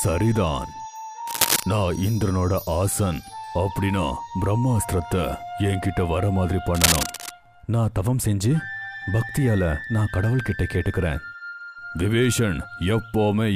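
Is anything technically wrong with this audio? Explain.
Yes. Two bursts of cable scratch noise, from 1.27 to 1.64 s and from 6.67 to 7.31 s, lay a dense, uneven rustling over the audio, roughly as loud as the sound itself. The likely cause is a worn cable, connector or control being moved, its contact resistance jumping rapidly. Unlike isolated clicks or crackle, each burst is a continuous scratchy texture lasting a fraction of a second, not separate pops.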